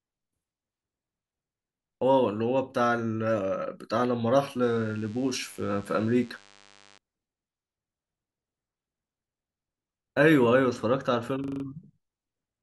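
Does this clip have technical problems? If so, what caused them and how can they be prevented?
Yes, there are two separate problems.

From 4.62 to 6.98 s there's a DECT cordless phone buzz running under the speech. It's a thin, steady 100 Hz buzz with a lot of harmonics, sitting well down, somewhere around 30 dB below the speech. That 100 Hz rate is the giveaway: a DECT handset or base nearby transmits a burst every 10 ms, and something in the mic or preamp chain rectifies it into audio. To prevent it, keep DECT phones and bases well away from the mic, cables and interface, and use shielded, balanced cabling.

At 11.44 to 11.64 s there's a system hang loop. A 40 ms slice of audio repeats exactly five times, giving a fast rattling stutter at 25 Hz rather than a clean buzz. The machine or audio driver stalled while the hardware kept replaying the same ring buffer, which fits a buffer of roughly 40 ms. 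Once it recovered, the speech picked up with next to nothing missing. To prevent it, use a stable driver, keep background load down on the recording machine, and give the audio process priority.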